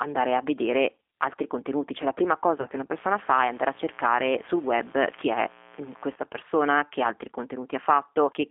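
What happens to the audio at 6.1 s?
At 6.1 s you're in the last moment of a mains buzz that started around 2.97 s, right after "che una", and cuts out at 6.16 s, just before "persona che altri." It's 60 Hz interference whose sharp switching spikes land twice per cycle, so you get a raspy 120-per-second rasp with harmonics reaching up into the kHz range, sitting well under the speech.

Underneath that, the whole clip carries G.729 codec damage. The speech is squeezed into a 300 Hz to 3.5 kHz phone band and rebuilt from a vocal tract filter plus a handful of pulses per frame, which fits an 8 kbit/s stream. That gives it a plainly rough, slightly synthetic edge.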